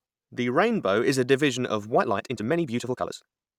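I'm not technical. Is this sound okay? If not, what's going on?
No. From about 1.91 s to the end, the speech suddenly runs about 1.78 times faster, which is a time-stretched section. It sounds rushed because the software likely squeezed that stretch to fit a shorter length by cutting out tiny slices of sound. The voice doesn't go high or squeaky, which is how this differs from simply playing a recording too fast, where speed and pitch rise together.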